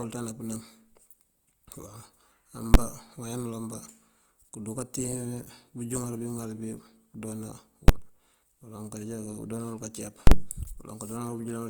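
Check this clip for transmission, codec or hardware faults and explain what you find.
Two kinds of fault are present: codec damage running through the whole clip, and three brief blocks where the signal jumps to an extreme value.

Opus compression runs from start to finish and is plainly audible. The speech has a grainy, rough, noisy texture rather than a swirling one, which points to the music (CELT) mode at a rate around 24 kbps. In that mode the encoder keeps each band's energy but, lacking bits, fills bands with folded lower content or noise. The likely cause is that low-rate encoding. A spectrogram would show full bandwidth without clear holes, with the upper bands looking smeared and noise-like.

Invalid numbers at full scale occur at 2.74 s, at 7.88 s, and from 10.27 to 10.32 s. A calculation produced infinite or invalid values, which were replaced by the largest possible value. 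For each block the waveform sits as a flat slab at one extreme, far beyond the speech peaks. The first two blocks last about 10.7 ms each, which fits a 512-sample block, and each is heard as a single bang. The last lasts about 43 ms, consistent with a 2048-sample block. It is heard as a loud pop at its start and its end with nothing between. On a spectrogram each event shows as a vertical broadband stripe at its edges.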